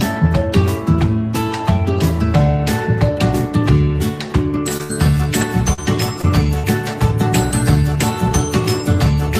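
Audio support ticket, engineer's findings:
Repeated packet loss (robotic sound), 4.77 to 6.65 s. Choppy stretch with pieces missing. Five dropouts totalling about 180 ms, longest 57 ms, roughly a tenth of the span. Probable component: network path and jitter buffer. Late or lost packets are patched by extending the preceding sound, rebuilding around 150 ms, then the next hole arrives.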